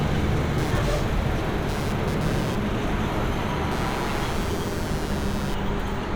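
Shifting processor and graphics load disturbs the audio circuit's shared ground, producing computer activity noise from 0.58 to 5.55 s: a buzzing chirp pulsing around 150 Hz, roughly 15 dB below the sound.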